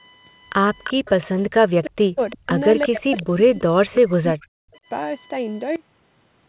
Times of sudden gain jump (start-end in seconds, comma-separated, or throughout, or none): 5.76-6.48